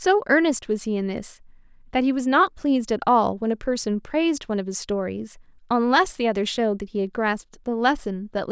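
Nothing in this short speech recording stands out as a technical problem, so there's no fault to point to or cause to explain.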